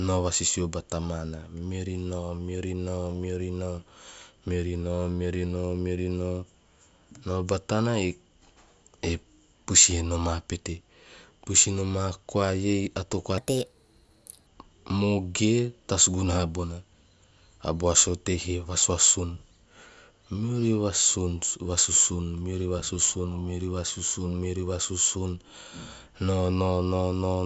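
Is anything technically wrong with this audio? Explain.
Yes. There is one fault. From 13.38 to 14.47 s, just after "koa iei ato koa", the speech has a wrong sample rate. The samples play too fast, with no conversion. That fits 16 kHz audio played at 22 kHz. Speed rises 1.38 times and pitch about 5.5 semitones, so the voice sounds high and hurried.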